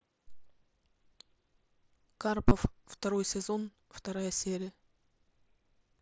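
At 2.49 to 2.51 s, concealed Bluetooth headset packet loss fills a gap of about 22.5 ms, which fits roughly three lost headset packets. The receiver repeats a closely matching recent stretch of waveform, so the speech briefly turns buzzy before a slight warble as it resumes, all over the light grain of the mSBC wideband link.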